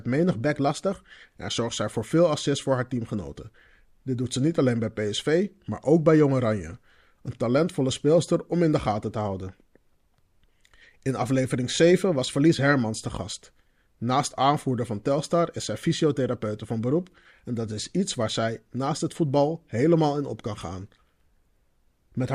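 A speech clip with a drift correction step, likely from clock-matching software abruptly raising the playback rate to rebalance its buffer. From 0.40 to 0.93 s the sound runs 5.3% fast and about 89 cents sharp, then snaps back just before "en zorgt zij voor".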